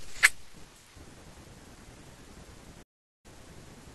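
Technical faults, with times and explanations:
2.82 to 3.26 s, digital broadcast dropout: the speech fades out in about 8 ms and leaves a silent hole of roughly 0.42 s. The receiver stopped getting frames it could decode, so it muted its output. The speech returns at 3.26 s, further along, without resuming where it stopped. Everything sent during the gap is gone for good. The gap's length fits a short run of about a dozen frames being lost together.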